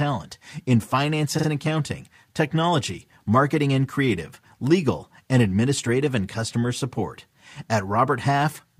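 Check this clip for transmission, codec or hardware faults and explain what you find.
One fault is present: repeated frames. From 1.38 to 1.47 s, between "in finance" and "and accounting technology marketing", a 46.4 ms block of compressed audio, which fits a pair of codec frames, was delivered twice more. The decoder replays it, producing a stutter and adding 92.9 ms to the speech.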